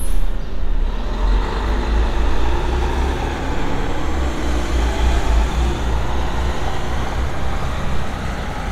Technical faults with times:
none

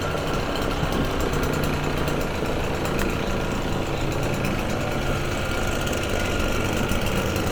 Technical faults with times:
3.02 electrical switching spike

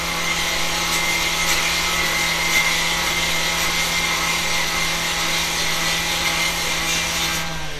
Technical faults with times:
0.00-7.79 MP3 compression

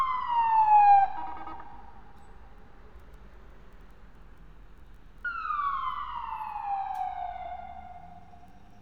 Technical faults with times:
none

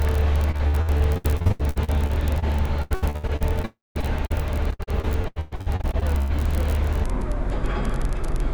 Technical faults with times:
0.51-2.44 repeated packet loss (robotic sound)
2.82-3.65 repeated packet loss (robotic sound)
3.65-3.97 long network dropout
4.01-4.32 short concealed packet loss
4.70-6.32 repeated packet loss (robotic sound)
7.04-8.54 section at the wrong speed

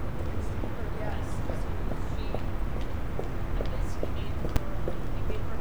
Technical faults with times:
4.56 invalid numbers at full scale

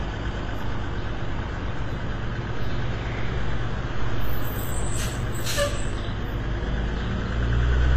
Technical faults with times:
0.00-7.96 transcoding between lossy codecs

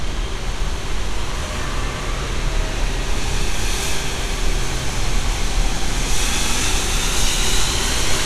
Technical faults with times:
0.00-8.25 resampler restarted on every block

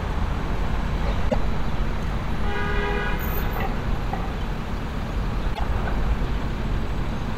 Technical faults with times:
1.26-1.35 damaged data in a compressed stream
5.51-5.60 damaged data in a compressed stream

